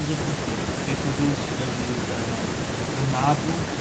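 Nothing stood out on listening to this speech recording, which carries the expected band limit of a call path at about 8 kHz.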